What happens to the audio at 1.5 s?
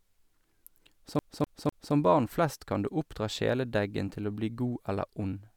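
At 1.5 s the speech is caught in a CD stuck on one turn, running from 1.19 to 1.94 s, just before "barn flest kan du". A scratch keeps knocking the laser back one track, so the same 0.25 s slice of speech plays three times, each pass broken by a brief mute at the jump. Unlike a buffer underrun, which leaves gaps of uneven length, these repeats are identical and evenly spaced, giving the fast, regular stutter of a skipping disc.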